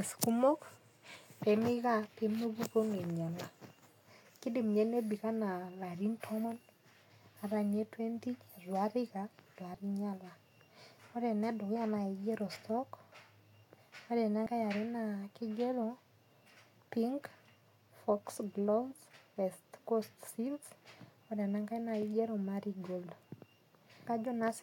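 Speech with compressed frames skipped at 6.44, 9.74, 12.55–12.57 (just after "enedukuya nakigero"), 14.45 and 24.06 s. At each point the audio jumps ahead, dropping roughly a tenth of a second, a sliver, about 50 ms, about 70 ms and about a fifth of a second. Missing or rejected frames cause this. A spectrogram shows an abrupt discontinuity in the harmonic traces.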